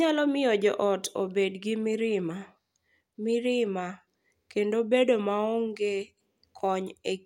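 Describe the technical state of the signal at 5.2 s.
The speech at 5.2 s is intact, with no technical fault at that point.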